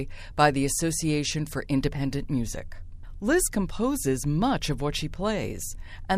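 Nothing in the speech stood out as a technical fault on listening.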